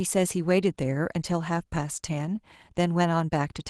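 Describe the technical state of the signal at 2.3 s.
At 2.3 s the speech is intact, with no dropout, click or distortion, only the ordinary character of the WebRTC call path it travelled through.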